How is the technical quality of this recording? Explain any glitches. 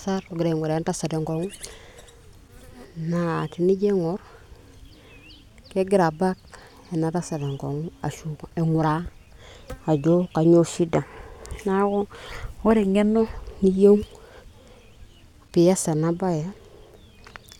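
The technical quality of the recording is good, and there are no glitches to explain.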